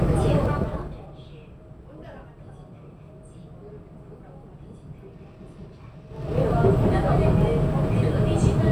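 Zipper noise runs from 0.43 to 1.11 s. The level drops about 25 dB in coarse steps of about 2 dB, roughly fifteen a second. Each unsmoothed step clicks, so ticking rides on the sound. It returns from 6.06 to 6.40 s as the level climbs back, zipping faster, near thirty steps a second.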